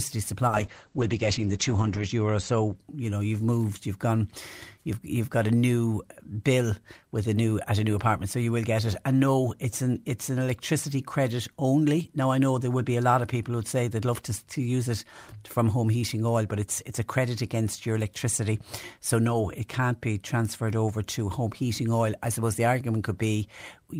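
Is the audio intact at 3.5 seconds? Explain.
Yes, the speech at 3.5 seconds plays through intact, with no dropout, click, distortion or other fault at that moment.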